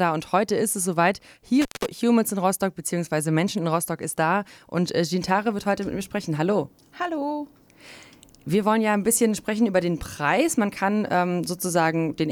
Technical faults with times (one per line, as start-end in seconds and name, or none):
1.61-1.86 intermittent contact